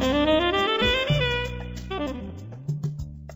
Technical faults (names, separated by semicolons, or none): time-stretched section